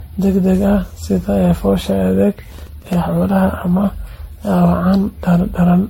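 A speech recording that sounds swirly, smeared and hollow throughout, with blurred attacks and nothing above 16.5 kHz. This is most likely generation loss from around seven MP3 passes at 64 kbit/s. Each re-encode on a shifted frame grid piles up fresh quantisation noise and spectral holes, so the damage is worse than a single low-bitrate encode would leave. From 2.52 to 2.93 s a gritty tearing crackle rides on top: processor overload crackle. Over a dozen tiny buffers, each around a millisecond and a half long, missed their deadlines and replayed old audio with hard edges. Unlike a lone click or a single dropout, it forms a dense burst that stops once the load clears.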